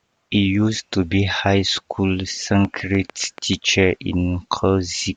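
Something in the chain, likely interference from nearby equipment or a faulty connection or power supply, injects a regular pulse into this speech recording, producing a train of clicks from 2.65 to 3.54 s, just after "to be high school". About seven near-identical clicks arrive at a steady 6.8 per second, heard as an even ticking that rises a few decibels above the speech and carries on through any gaps between words.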